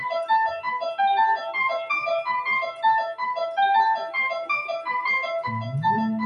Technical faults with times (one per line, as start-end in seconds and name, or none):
0.00-6.25 noise suppressor applied to music or sounds
1.37-1.55 sound cut by the noise suppressor
2.65-2.84 sound cut by the noise suppressor
3.97-4.15 sound cut by the noise suppressor